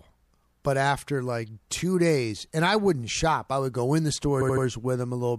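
Speech stutters at 4.40 to 4.64 s, just after "would go in the": a 78 ms chunk replays three times. These are repeated frames, compressed data played again, adding 0.24 s.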